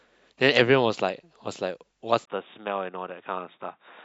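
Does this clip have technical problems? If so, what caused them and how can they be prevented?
Yes. At 2.25 s the speech drops out for about 20 ms, then continues duller and boxier, with nothing above 3.8 kHz and a faint new noise floor about 50 dB down, at much the same level, to the end. This is most likely an input switched to a poorer device, with a brief gap at the changeover and a new noise floor setting it apart from a simple filter or bandwidth drop. Fixing the input device and disabling automatic switching before recording prevents it.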